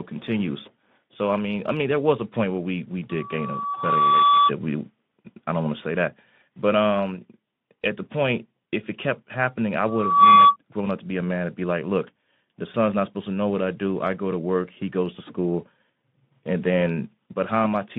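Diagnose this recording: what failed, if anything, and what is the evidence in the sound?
Loudspeaker feedback squeal, acoustic loop between the loudspeaker and microphone: a 1.1 kHz tone swells from 3.09 to 4.52 s after "point where we we", building over about a second to roughly 5 dB above the speech. It returns from 9.87 to 10.56 s, between "it kept happening I" and "grown up to be", rising faster, in under half a second, to about 10 dB above. Loop gain exceeds unity at that frequency.

VoIP packet loss concealed by the speech codec, network stage: at 3.74 to 3.83 s, inside the first squeal, the Speex narrowband line (150 Hz to 3.6 kHz) briefly smears into a fading extrapolation. This fits one lost 20 ms frame, with the decoder taking about 0.1 s to recover.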